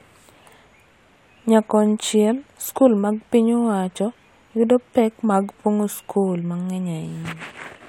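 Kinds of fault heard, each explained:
Nothing's wrong with this bit of speech; there's no technical fault anywhere in it to point out.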